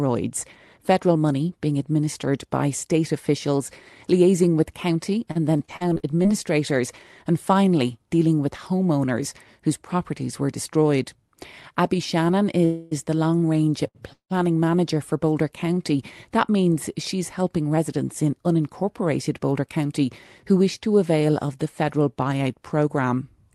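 Speech carried over a WebRTC call path, with high frequencies rolled off near 12 kHz, consistent with Opus at around 32 kbps, shows several network faults. From 5.31 to 6.29 s, just after "officials liaising with county", there is repeated packet loss (robotic sound): ten separate holes opened in the stream, the longest 39 ms, and each was patched by extending the previous sound. About 219 ms was synthesised and 160 ms of real audio is gone, so the passage sounds choppy and mechanical. Two call audio freezes follow, most likely from packets held up in transit draining the jitter buffer. At 12.65 to 12.93 s the last sound is stretched into a fading buzz or hiss for about 261 ms. At 14.13 to 14.32 s a 175 ms hold ends in 100 ms of silence. In both cases the audio resumes where it stopped, so a gap is inserted rather than anything lost. Between them, at 13.87 to 13.97 s, right after "the long range", a short stall from a late packet left the buffer empty for 74 ms, so one sound is held too long with a slight buzz or dip before carrying on intact. 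At 15.64 to 15.83 s a jitter buffer slow-down repeated pitch periods to rebuild its reserve, adding 36 ms and running the audio at 85% speed, which drags the sound out at unchanged pitch. From 17.77 to 18.91 s, after "means she's helping", a jitter buffer speed-up trimmed about a tenth of a second of pitch periods to cut excess delay, so the speech runs at 109% speed and sounds hurried.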